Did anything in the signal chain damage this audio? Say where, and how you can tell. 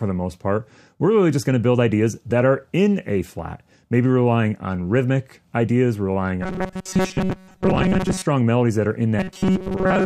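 Yes, likely at the driver or buffer stage. Robotic sound from repeated short buffers at 6.42–8.26 s and 9.19–10.06 s. Most of the audio is replaced by a fixed 188 Hz buzz, from a roughly 5.3 ms block being repeated.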